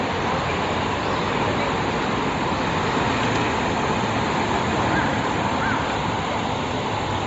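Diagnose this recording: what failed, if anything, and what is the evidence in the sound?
The fault sits at the codec stage and runs through the whole clip. Nothing is heard above about 7.7 kHz, and the upper band has a breathy, grainy texture instead of clean detail. The damage is plainly audible. This is likely Bluetooth LC3 compression. The transform codec discards much of the high spectrum and fills the gaps with shaped noise. The coarseness fits a low rate near 32 kbps with 10 ms frames.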